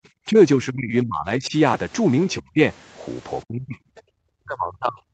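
The speech dips at 0.3 s, slightly and briefly. Longer, deeper dips follow from 0.56 to 1.55 s, 2.4 to 2.59 s and 3.44 to 3.77 s, each sinking further, down to roughly 35 dB. This is likely speech suppressed in double talk. The echo canceller could not separate the talker from loudspeaker echo and turned both down.

From 3.97 to 4.01 s, a faint scrap of a second voice comes through, far below the speech. This is likely the other side's voice leaking through, loudspeaker sound the canceller failed to remove.

From 4.05 to 4.15 s, the background is gated by the echo canceller. The room sound drops by about 33 dB for a tenth of a second, then returns. The canceller clamped the microphone hard while the loudspeaker played.

From 4.43 s to the end, the speech sinks again by roughly 35 dB. This is likely the same double-talk suppression, with the canceller still cutting the talker's level.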